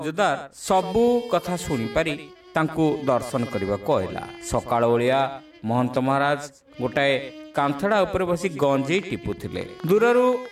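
A train of clicks runs from 8.95 to 10.47 s: around fifteen similar pulses at about 8.6 per second, irregularly spaced and roughly as loud as the sound itself. Their matching shape and steady presence set them apart from random crackle, likely from equipment interference or a faulty connection or power supply.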